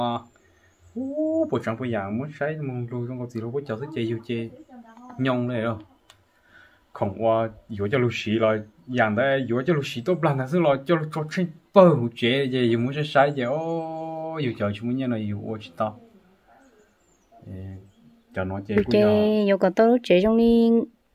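No faults are audible at any point in this recording.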